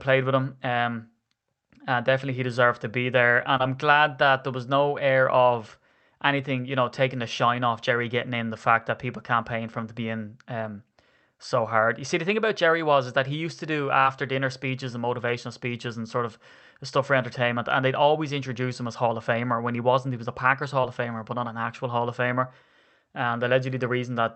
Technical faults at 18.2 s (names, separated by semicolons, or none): none